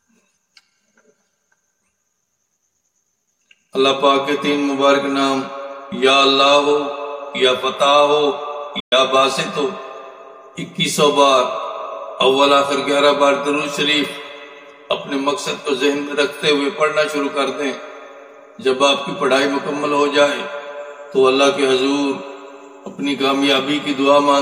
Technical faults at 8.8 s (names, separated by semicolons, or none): Bluetooth dropout